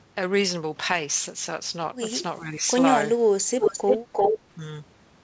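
From 2.39 to 2.64 s the speech sinks by about 10 dB and thins out in patches, with roughly a third of a second affected in all. The level comes back once the passage ends. This is likely speech suppressed in double talk: with both ends talking together, the echo canceller couldn't tell this talker apart from the returning loudspeaker echo, so it pulled the whole signal down rather than risk passing echo.

Between 3.59 and 4.39 s a second copy of the speech trails the original by about 349 ms, arriving at about the same loudness as the direct sound. That makes it a distinct, doubled repeat rather than a faint tail. The likely cause is an echo leak: the far end was on a loudspeaker, and its echo canceller failed to strip what its microphone picked up, so the call audio returned over the G.722 path, which carries nothing above 8 kHz.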